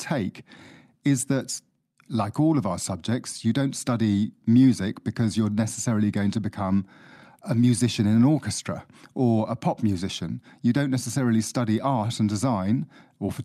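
No technical faults can be heard anywhere in the speech recording; the signal stays steady and continuous throughout.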